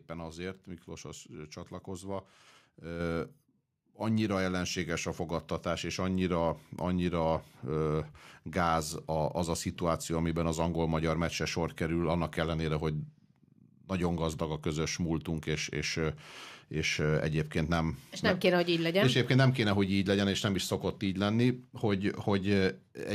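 At 3.0 s, then at 6.21 s between "ellenséges a fogadtatás és" and "annyira ö gáz", speech and background jump louder together, by about 5 dB and about 2 dB: microphone volume stepped up, as call software raised input gain in single steps.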